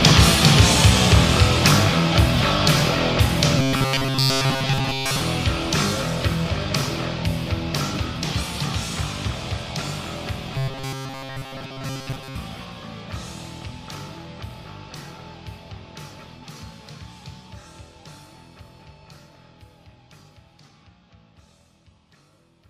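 Robotic sound from repeated short buffers appears twice, from 3.57 to 5.20 s and from 10.54 to 12.36 s. A rigid metallic buzz at 134 Hz replaces most of the real audio. That fixed tone sets it apart from an ordinary pitch shift and points likely to repeating about 7.5 ms buffers.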